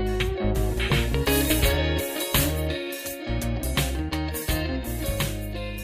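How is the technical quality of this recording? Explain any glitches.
The quality takes a hit partway through: from about 1.26 s to the end, the top end is strongly overcooked. That's pre-emphasis left on. The treble boost that goes in before transmission never got its matching de-emphasis on the way out, and the curve fits a 75 µs FM characteristic, leaving 10 kHz about 14 dB hotter than 1 kHz. The result is a thin, glassy, sharply bright sound with hissy, sibilant edges.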